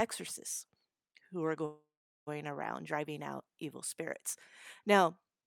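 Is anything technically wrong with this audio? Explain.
Yes. From 1.65 to 2.29 s, right after "who are", the speech stalls: the last sound stretches into a fading buzz, then 420 ms of silence, before "around driving out evil" resumes intact but 614 ms late. This call audio freeze likely comes from delayed packets emptying the jitter buffer.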